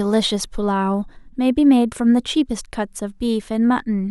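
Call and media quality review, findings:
No faults detected in clip.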